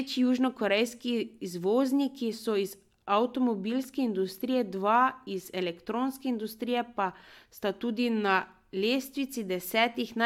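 No technical faults are audible anywhere in this speech recording.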